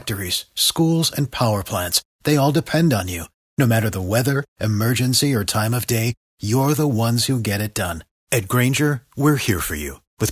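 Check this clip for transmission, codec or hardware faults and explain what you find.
No transmission, codec or hardware faults are audible here.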